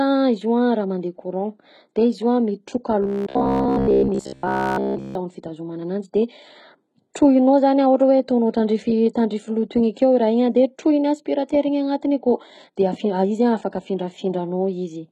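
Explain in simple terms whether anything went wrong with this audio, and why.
The speech sounds gritty throughout, with rough, lispy s sounds. This is likely heavy HE-AAC compression rebuilding treble from copied lower bands.

From 3.02 to 5.15 s, just after "io a mitroka", the speech becomes a rigid metallic buzz near 67 Hz. This is robotic sound from repeated short buffers, likely caused by a roughly 15 ms fragment being replayed in place of most of the real audio.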